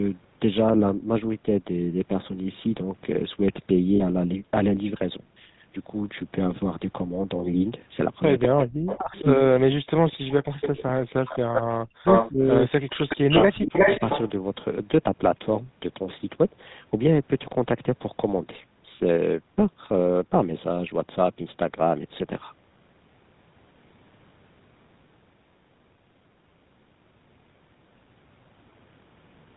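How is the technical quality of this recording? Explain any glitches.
The recording is noticeably degraded: plainly audible GSM full-rate codec coloration throughout, one brief frame-loss glitch, and a stretch from about 8.5 to 14.3 s where the speech is repeatedly suppressed and echoed.

GSM full-rate codec, throughout: The speech has the buzzy, gravelly roughness of the original GSM coder, which fits 13 kbps full-rate coding. The codec models the vocal tract and excites it with sparse, regularly spaced pulses, so fine voice detail is lost. On a spectrogram, energy stops sharply at 4 kHz. The harmonics look smeared and grainy.

Lost GSM frames, 3.96 to 4.01 s: For about 40 ms, which points to two dropped 20 ms frames, the decoder reused the last good frame's parameters. The result is a short, rough metallic ring instead of the real speech. On a spectrogram it appears as a frozen, repeated spectral slice. 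The waveform shows a brief stretch of repeating pattern.

Speech suppressed in double talk, 8.47 to 9.15 s, 9.5 to 11.3 s and 11.82 to 13.75 s: The speech dips sharply, by around 40 dB at its deepest, and loses its top end or breaks into pieces. This is likely an echo canceller that couldn't tell the talker from returning loudspeaker sound while both sides spoke, so it turned everything down. About half a second, a second and a half, and a second are affected in the three spans. The waveform shows gouged, near-silent chunks, and the spectrogram shows vertical gaps.

Echo leak, 10.1 to 10.69 s, 11.28 to 11.62 s, 12.06 to 12.3 s and 13.08 to 14.3 s: A delayed copy of the speech comes back. The first leak returns 202 ms late at about 5 dB below the speech. The second returns 362 ms late, also about 5 dB down. The third and fourth return 362 ms late at roughly the same level as the speech. The likely cause is a loudspeaker on one side whose echo canceller let part of the pickup through. 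A spectrogram shows ghost copies of the speech patterns offset in time.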